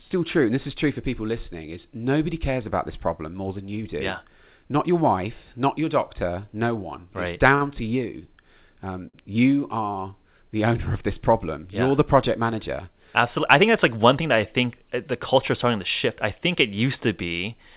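At 7.55 s, after "no one right it's" and before "to you", there is a short stall from a late packet. A packet missed its slot and the jitter buffer ran dry. The receiver stretched the last sound for 56 ms until the packet came in, then carried on from the same point. Nothing is lost. The sound before "to you" is simply held too long, with a slight buzz or dip. A second stall follows at 9.09 s, this time 50 ms. Each one pushes playback later by the filled amount.

From 12.93 s to 13.95 s, after "you're the project manager" and up to "one thing that I", comes a jitter buffer speed-up. The buffer had built up more audio than it wants. To shed that delay, the receiver cut out short pitch-period slices again and again, roughly 50 ms in all. Playback runs at 104% speed with no change in pitch. All of this passes through a narrowband call path that has nothing above 4 kHz, which fits G.711 mu-law.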